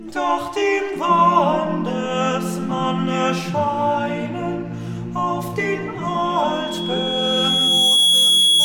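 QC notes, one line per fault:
6.07–8.64 s: loudspeaker feedback squeal. A pure tone at 3.3 kHz appears and swells over about two seconds, then runs to the end of the clip, ending up around 5 dB above the programme. The microphone is hearing the loudspeaker it drives, and at 3.3 kHz the round trip gains more than it loses, so that frequency keeps feeding itself. On a spectrogram this shows as a single bright horizontal line that thickens and brightens, and the waveform's envelope rises steadily.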